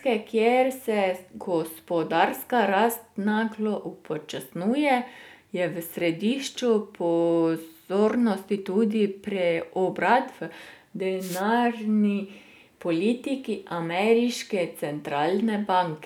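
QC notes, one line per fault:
11.19–11.43 s, wireless microphone noise hit: a 0.24 s swish of static as the FM radio link fades and receiver noise rises, seen as a broadband smear on the spectrogram.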